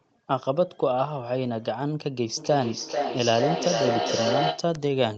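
From 2.37 s to 4.76 s the speech comes back on itself roughly every 400 ms, each return thinner and more ringing, and the loudest repeat reaches about 1 dB below the speech itself. This is feedback echo between two devices: a second device in the same room plays this microphone's signal, the microphone picks that playback up again, and the local echo canceller cannot remove sound it did not play, so the loop keeps circulating.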